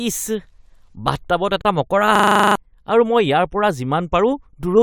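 At 1.61 s a gap between stream segments cuts the speech for 34 ms. Two segment time stamps leave a small hole, and the player fills it with silence. The dropout has hard edges. No audio is lost. The speech resumes intact.

From 2.15 to 2.55 s a system hang loop takes over. The system froze while the hardware kept replaying its ring buffer. One 40 ms piece repeats ten times, a rapid 25 Hz stutter. About 400 ms of the speech is lost.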